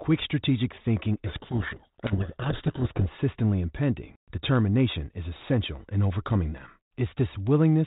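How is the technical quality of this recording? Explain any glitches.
There is one glitch, a codec payload misread from 1.26 to 3.06 s. Sender and receiver disagreed on the bit order of the G.726 code words, so the decoder rebuilt the wrong differences and buried the speech in harsh distortion. The light band-limited colouring of the G.726 ADPCM coding, which fits a 32 kbit/s link, is audible throughout.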